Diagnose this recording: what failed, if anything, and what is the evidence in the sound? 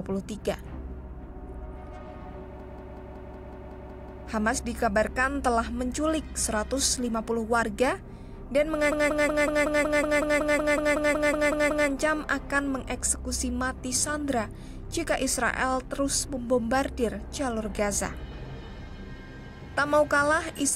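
A system hang loop at the driver or buffer stage, from 2.60 to 4.27 s (9 repeats) and 8.92 to 11.89 s (16 repeats): a 186 ms slice replays identically at 5.38 Hz, fitting an 8192-sample ring buffer cycling while the host froze. Unlike packet-loss concealment, the repeats never decay or vary.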